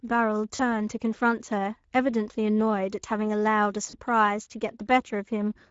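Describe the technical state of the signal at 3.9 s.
VoIP packet loss concealed by the speech codec, 3.89 to 3.97 s: about 40 ms went missing, consistent with two lost frames. The decoder extrapolated its last pitch and filter with falling gain, giving a brief, fading smear. Speex codec damage runs underneath throughout, consistent with a mid setting near 16.8 kbps, leaving the speech audibly hoarse and noisy.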